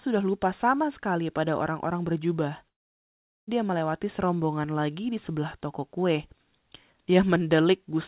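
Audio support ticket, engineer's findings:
Sound turns to fading buzz at 2.68 s, then near-silence until 3.49 s; about 0.8 s missing on resume. Likely long network dropout; receiver concealment over a narrowband call path, nothing above 4 kHz.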